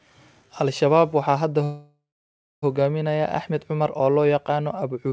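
A call audio freeze runs from 1.64 to 2.64 s. The speech halts and the last sound is drawn out as a fading buzz or hiss that settles into about 0.6 s of silence before the talk resumes exactly where it stopped. This most likely comes from packets arriving late and the jitter buffer running dry, so roughly 0.98 s was filled in and nothing was lost. The band stops at 8 kHz, which fits a wideband call codec.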